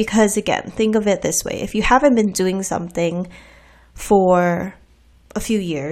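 Speech recording, no technical faults detected.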